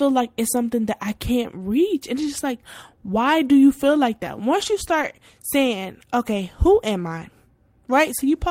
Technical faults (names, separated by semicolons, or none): lost packet rebuilt from error correction